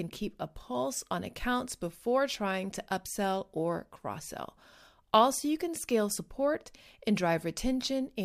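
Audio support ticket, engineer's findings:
Engineer's findings: no audio fault found in this speech clip.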